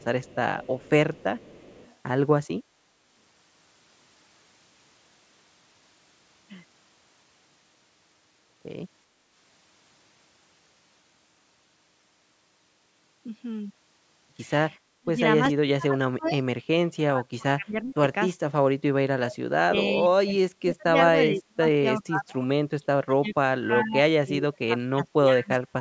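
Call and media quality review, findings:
Echo leak, 0.00–1.95 s, 16.24–16.30 s, 23.29–23.33 s: the far-end echo canceller likely left residual loudspeaker pickup, returning a faint 369 ms delayed copy of the speech, roughly 20–30 dB below it.

Speech suppressed in double talk, 15.0–18.56 s and 19.17 s to the end: the canceller likely treated the overlap as echo and attenuated the talker, giving dips of up to roughly 35 dB across about 2 s and 5 s of speech. Band-limiting at 8 kHz comes from the call microphone path.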